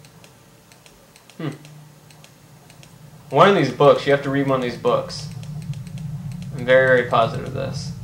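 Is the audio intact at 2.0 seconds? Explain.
Yes, the audio is intact at 2.0 seconds, with no dropout, click, distortion or other fault audible at that moment.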